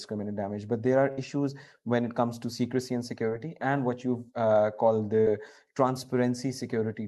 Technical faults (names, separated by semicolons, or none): burst of packet loss